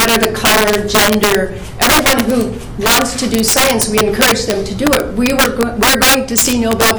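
Integer overflow runs throughout the clip: with the level driven about 9 dB too hot, every peak past the integer limit wraps to the opposite sign instead of being held, so a few percent of samples flip across the full range, producing violent cracks far sharper than clipping.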